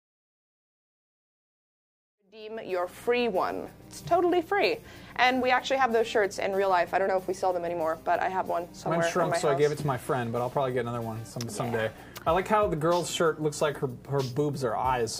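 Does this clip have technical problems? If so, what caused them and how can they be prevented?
No, no technical faults.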